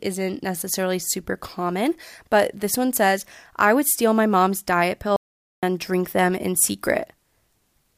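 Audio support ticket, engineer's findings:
Input link likely dropped, recorder kept writing zeros: audio dropout to silence, 5.16–5.63 s, speech cut mid-flow, 0.46 s lost, dead-silent gap without room tone.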